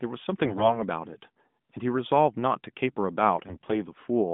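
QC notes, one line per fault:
0.44–0.83 s and 3.46–3.82 s, AMR bit errors: the speech goes hoarse and gargly while pitch and level hold, since flipped bits scramble the codec's pulse and gain data.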